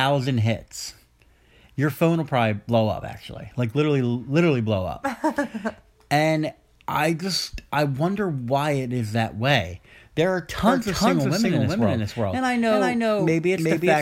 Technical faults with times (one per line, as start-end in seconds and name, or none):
10.67-14.01 doubled audio track